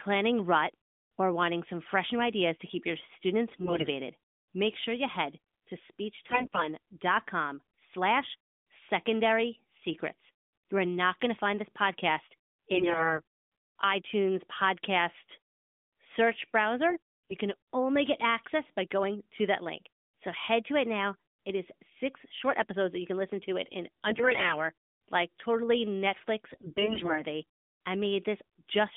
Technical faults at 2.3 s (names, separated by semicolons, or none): none